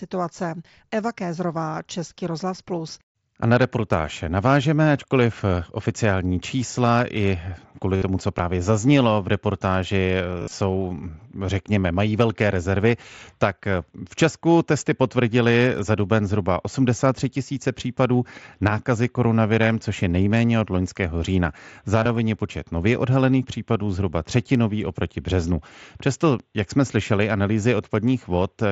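Concealed Bluetooth headset packet loss hits this speech at 7.96–8.02 s, between "oficiální čísla i kvůli" and "co právě zaznělo v", at 10.40–10.52 s, and at 22.03–22.06 s after "nejméně od loňského října". Lost headset packets are bridged by repeating recent waveform, giving short buzzy held tones.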